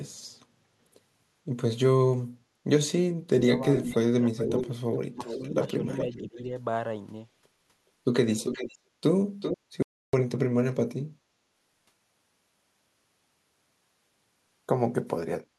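From 3.46 to 4.5 s, and again from 5.15 to 6.48 s, the speech dips by roughly 10 dB in patches, around a third of a second in total in the first stretch and about 0.7 s in the second. This is speech suppressed in double talk, likely an echo canceller turning down everything when both sides spoke at once.

Overlapping this, from 3.73 to 6.43 s, a faint second copy of the speech trails 418 ms behind, about 10 dB below it. It returns briefly at 8.45 to 8.78 s and 9.4 to 9.58 s with a 389 ms lag, the second burst only about 5 dB down. This echo leak most likely comes from one side's loudspeaker feeding its microphone, with its canceller failing to remove all of it.

At 9.83 s the audio drops to total silence with no room tone, returning at 10.13 s after about 309 ms. This audio dropout to silence likely came from the input being lost while silence kept being written.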